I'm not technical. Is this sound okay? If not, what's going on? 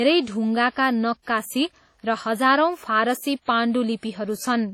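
No, not quite. All the way through, this speech has a processed quality, as if two different kinds of compression damage are stacked on top of each other. That's most likely transcoding between lossy codecs: the sound was squeezed by one format, which points to WMA, then squeezed again by another, likely HE-AAC. The second pass wastes effort preserving the first one's flaws and adds its own, and nothing above roughly 18.4 kHz survives.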